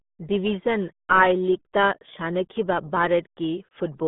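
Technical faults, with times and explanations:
Throughout, RealAudio 14.4 codec: the speech is confined to a narrow telephone-like band of roughly 150 Hz to 3.6 kHz, with nothing at all above 3.8 kHz, so consonants lose their crispness and the sound turns dull and boxy. The heavy, gargling smear over every syllable comes from a very low-rate coder discarding most of the signal detail, which fits the 8 kbit/s budget of RealAudio 1 designed for dial-up modems.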